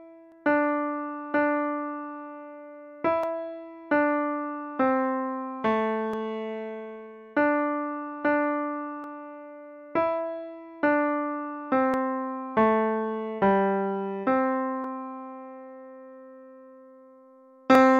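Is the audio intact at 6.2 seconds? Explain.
No. The moment at 6.2 s falls inside clock drift buffer slips spanning 0.32 s to 17.75 s. Two devices likely run on clocks roughly 150 ppm apart, so their buffer periodically drops or repeats a small sample block, heard as a click every 2.91 s.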